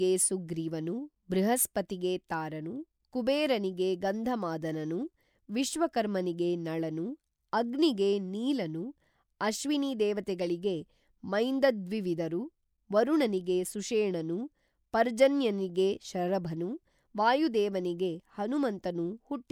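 Nothing in this recording stands out as a technical fault, so there's nothing to flag anywhere along the way.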